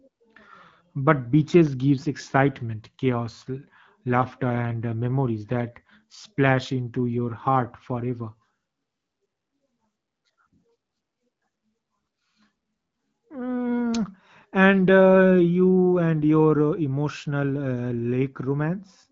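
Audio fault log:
No faults heard in this HD Voice speech.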